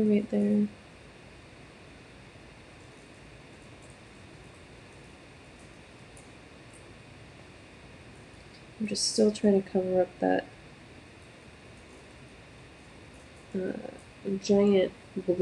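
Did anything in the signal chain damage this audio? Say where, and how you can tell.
No, no stage of the signal chain left an audible mark on this audio, from the wiring and converter through to storage and playback.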